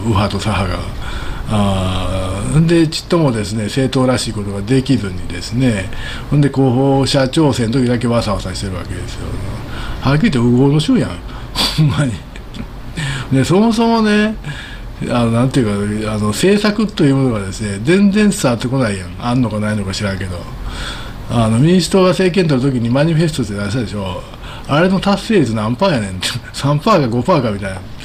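No technical faults are audible.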